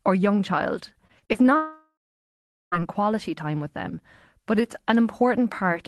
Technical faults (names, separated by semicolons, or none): repeated packet loss (robotic sound); long network dropout